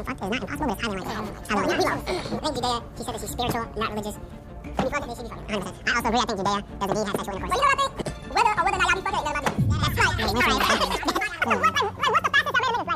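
From start to finish, the audio is read two samples at a time. It plays at double speed, 2x, and sits a full octave high, 12 semitones up. The reader treats each pair of samples as a single frame, which fits a mono stream taken as stereo or as samples twice as wide. Everything rushes past and sounds thin and chirpy.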